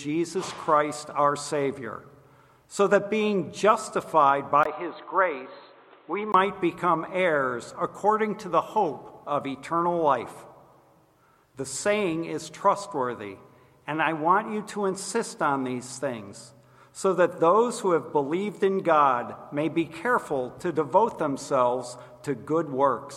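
From 4.63 to 6.34 s the sound turns dull and boxy, with nothing above 4.2 kHz, a brief 20 ms gap at the change, and new background noise roughly 30 dB below the signal at about the same level, likely an input switched to a poorer device.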